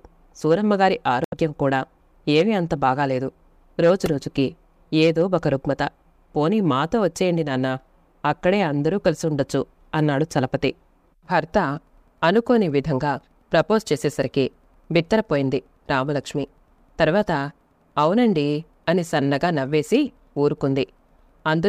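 A brief garbled glitch breaks into the audio at 1.24 s and runs to about 1.34 s. This is damaged data in a compressed stream. Bytes in that stretch of the encoded file were corrupted, so the decoder misread the affected frames and lost sync. It produced a burst of wrong output, adding about 22 ms, until it found a valid frame header and resumed. At 4.06 s a tiny buzzing click is heard, caused by a repeated buffer. New audio failed to reach the output in time, so the device replayed the same 1.45 ms chunk four extra times, which fits a 64-sample buffer. Each repeat joins the next with a hard edge, and a piece that short sounds like a click or buzz rather than a stutter. A few milliseconds of the real audio are lost there.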